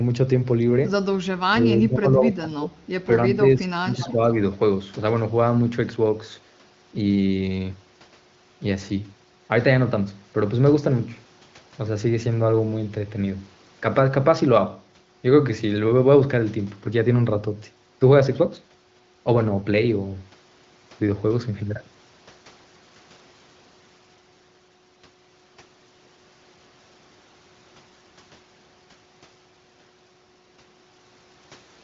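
From 1.49 to 2.75 s the speech dips and breaks up, by roughly 20 dB at worst, likely speech suppressed in double talk. The waveform shows ragged gouges totalling about a second.

From 3.3 to 4.22 s a milder version of the same speech suppression in double talk follows. Drops of around 10 dB scallop the envelope and thin the upper bands on a spectrogram.

At 4.01 s a brief echo leak surfaces. A faint copy of the speech, about 15 dB down and delayed 280 ms, likely slipped past a loudspeaker-side echo canceller. It appears as a short, weak smear of repeated harmonics.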